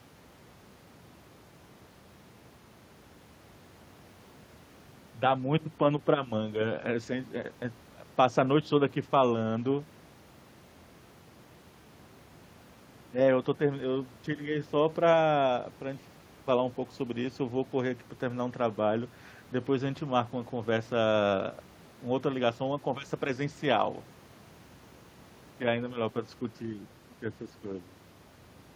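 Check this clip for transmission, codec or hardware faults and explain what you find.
Nothing in the speech points to a transmission, codec or hardware fault, so there is nothing to report.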